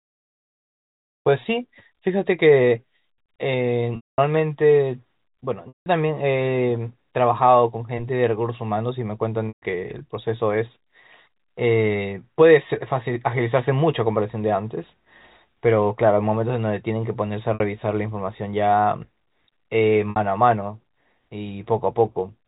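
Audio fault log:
3.96 to 20.16 s, packet loss with pitch repetition: gaps at 3.96 to 4.18 s (220 ms), 5.68 to 5.86 s (180 ms), 9.48 to 9.62 s (140 ms), 17.54 to 17.60 s (60 ms) and 20.10 to 20.16 s (60 ms). The receiver loops the last pitch period, so each gap starts as a held, buzzy tone. That loop fades over about 50 ms. The three longer gaps therefore drop to silence before speech cross-fades back. The two short ones sound mostly like a brief buzz.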